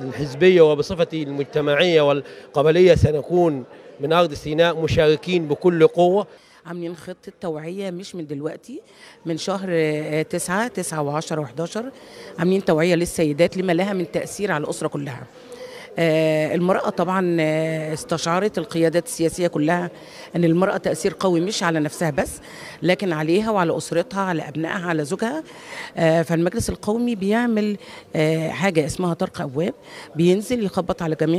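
No technical faults are audible anywhere in the recording.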